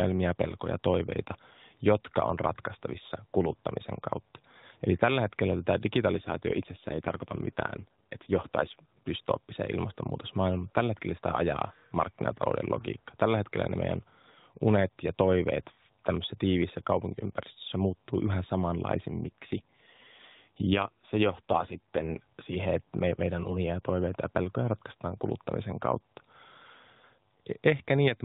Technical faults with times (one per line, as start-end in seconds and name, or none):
6.12-9.11 AMR rate drop
19.17-22.21 AMR rate drop